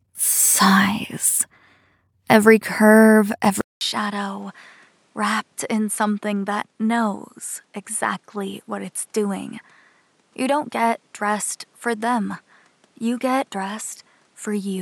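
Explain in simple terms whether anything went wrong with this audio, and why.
At 3.61 seconds the sound cuts out for a fifth of a second, then comes back noticeably quieter, duller, with a faint new background hiss, and stays that way to the end. This is likely an input switched to a poorer device, one that captures nothing above 11.8 kHz.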